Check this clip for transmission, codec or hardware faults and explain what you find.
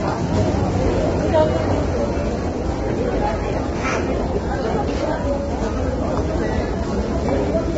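One codec fault runs through the whole clip. Throughout, the sound is rough and grainy, with a hard ceiling near 7.8 kHz, likely low-delay AAC compression: its short frames blur detail and, at a rate fitting about 16 kbps, fill gaps with noise, unlike ordinary band-limiting, which stays clean.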